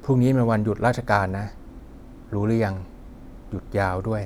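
No technical faults can be heard in the speech.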